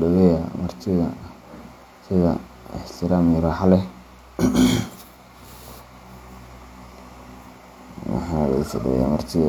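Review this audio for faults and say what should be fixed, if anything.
Nothing here needs fixing; no faults turn up anywhere in this speech recording.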